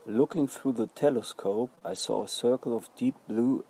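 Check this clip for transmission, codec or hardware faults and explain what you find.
Two kinds of transmission fault are present in this speech clip: packet losses rebuilt from error-correction data, and a short stretch of concealed packet loss.

Lost packet rebuilt from error correction, 0.31 to 0.41 s and again 1.83 to 2.25 s: packets went missing, but the following packets carried low-bitrate backup copies. The decoder played those, so there is no dropout. About 60 ms is rebuilt in the first stretch, pointing to roughly three lost packets. About 220 ms is rebuilt in the second, pointing to around eleven. Those passages sound coarser and noisier.

Short concealed packet loss, 1.75 to 1.79 s and 1.79 to 1.83 s: two back-to-back chunks of about 20 ms each arrived too late to use. With no backup copy available, the receiver extended the preceding sound to bridge the holes, filling about 13 ms and 20 ms respectively, then blended back into real audio. 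This gives a brief smeared or wobbling moment right before the longer rebuilt passage begins.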